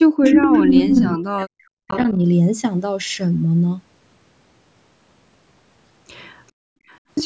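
From 0.0 to 0.95 s the speech dips and breaks up, falling by around 40 dB at its deepest. It happens again from 1.11 to 1.81 s. This is speech suppressed in double talk. Both ends were likely talking at once, and the echo canceller turned the near talker down along with the echo.

An echo leak overlaps this, from 0.25 to 1.15 s. A copy of the speech returns 423 ms late. It is louder than the speech itself. The likely cause is a loudspeaker echo the canceller failed to remove. A weaker leak follows from 1.88 to 2.14 s, well below the speech.

From 6.52 to 6.87 s the background drops out by about 34 dB, then returns. This is background gated by the echo canceller, which clamped the microphone while the loudspeaker played. A very faint echo leak trails it, from 6.87 to 6.98 s, at the same 423 ms delay.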